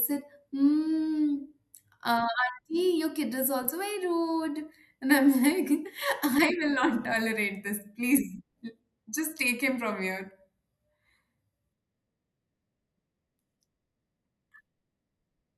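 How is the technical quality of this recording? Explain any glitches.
No technical glitches can be heard anywhere in this recording.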